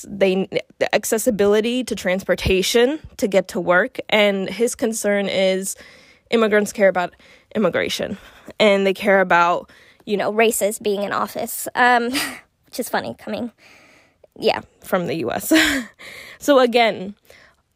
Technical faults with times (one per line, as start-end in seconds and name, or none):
10.18-14.58 section at the wrong speed